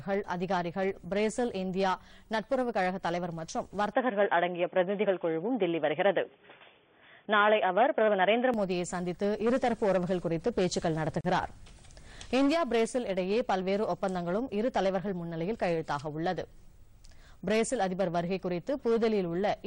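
From 3.93 s to 8.54 s the audio turns dull and boxy, with nothing above 3.5 kHz, a level shift of a few decibels and a faint new noise floor, then clears again. This is likely an input switched to a poorer device; unlike a plain low-pass filter, the tone, level and noise all change together. At 11.21 s a 37 ms silence cuts into continuous sound, a gap at a join of encoded pieces, where untrimmed encoder delay and padding remain. It is unlike a dropout because the sound resumes exactly where it stopped, with smeared edges.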